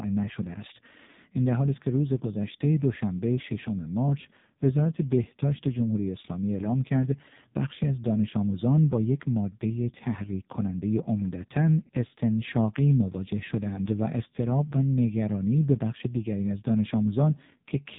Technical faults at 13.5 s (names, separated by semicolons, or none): AMR narrowband mobile codec